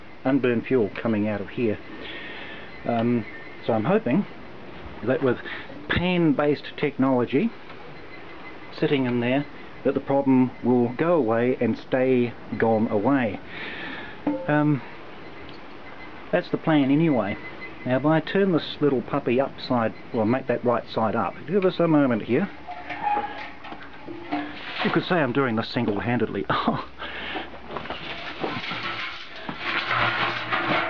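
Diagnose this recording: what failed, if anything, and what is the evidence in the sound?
Nothing in the recording points to a failure at any stage of the chain. No event in the sound calls for a diagnosis, so there is nothing to tie to a time or a mechanism.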